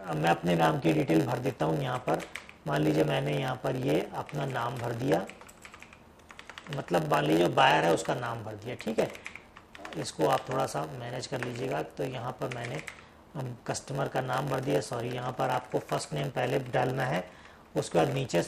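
A block size mismatch (padded) runs throughout: shorter blocks are zero-filled to the next stage's size, producing a 91.9 Hz buzz and playback slowed to 0.919× at unchanged timbre.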